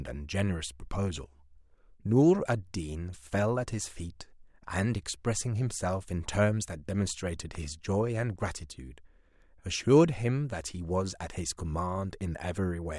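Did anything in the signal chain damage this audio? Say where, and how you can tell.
Yes. A single loud pop at 7.55 to 7.57 s sits a few decibels above the speech, which continues underneath. This is likely a voltage transient in the analogue wiring.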